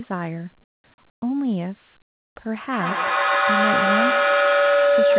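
In the pauses at 0.64 to 0.84 s, 1.1 to 1.22 s and 2.02 to 2.36 s, comfort noise in place of the background drops the level by about 18, 14 and 20 dB, likely from discontinuous transmission. The real background becomes a flat, smooth hiss, showing as uniform, textureless bands on a spectrogram.

From 2.72 s to the end, a feedback howl builds as the sound loops between microphone and loudspeaker, gaining level each trip. It narrows to a tone near 500 Hz, with the loop repeating roughly every 150 ms, and peaks about 7 dB above the speech: a bright horizontal line with a swelling waveform envelope.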